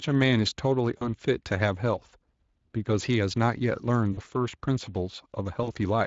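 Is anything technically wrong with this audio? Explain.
Yes. Speex codec coding runs throughout. Limited excitation bits at a setting near 21 kbps leave the speech noisy and hoarse, with plainly audible damage.

VoIP packet loss concealed by the speech codec occurs at 0.97, 4.13 and 5.63 s. About 40 ms is lost each time. The decoder extends its last pitch and filter into a fading buzz or coloured noise, and the voice stays weak briefly afterwards.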